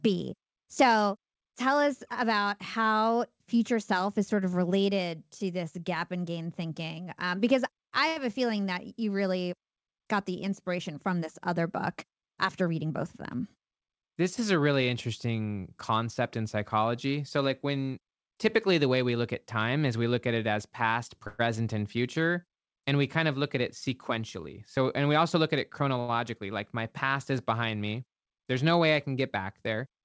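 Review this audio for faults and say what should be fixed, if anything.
Short stall from a late packet at 8.08 to 8.19 s, right after "because I", and at 26.00 to 26.18 s, just before "like my past is". A packet missed its slot, the jitter buffer ran dry, and the receiver stretched the last sound by about 81 ms and 83 ms, so a syllable hangs with a slight buzz or dip. Nothing is lost. A slightly deeper jitter buffer target would absorb these late arrivals.

Jitter buffer speed-up at 12.15 to 13.73 s, and at 24.17 to 25.97 s, between "of look at it" and "like my past is". The buffer was overfull, so the receiver trimmed tiny pitch-period slices over and over, playing at 106% speed at the same pitch and dropping roughly a tenth of a second. The stretch sounds rushed. Letting the buffer shrink more gradually would keep the pace natural.

Call audio freeze at 21.27 to 21.42 s. About 116 ms of the last sound is held and drawn out as a fading buzz or hiss, without dropping to silence, and then playback picks up where it left off. 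The likely cause is packets held up in transit. More network headroom or better jitter handling would help here.

Through all of this the G.722 call path at 64 kbps caps the band at 8 kHz, which is expected for that codec.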